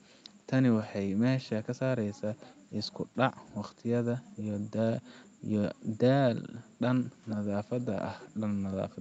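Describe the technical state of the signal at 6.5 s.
At 6.5 s the speech is intact, with no fault to be heard.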